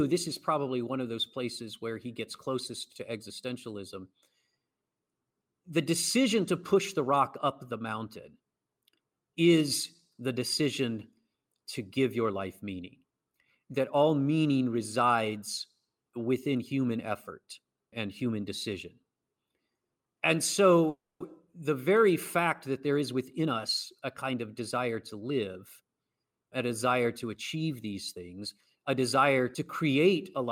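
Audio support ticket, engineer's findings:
Call audio freeze, 20.89–21.22 s: jitter buffer likely ran dry on delayed packets. Receiver stretches last sound as fading fill, then about 0.22 s silence. Playback resumes where it stopped. Nothing lost, but 310 ms extra delay inserted.

Jitter buffer speed-up, 22.94–25.88 s: buffer overfilled. Receiver trims short pitch-period slices repeatedly, about 0.3 s in total, running at 110% speed. Speech sounds hurried, pitch unchanged.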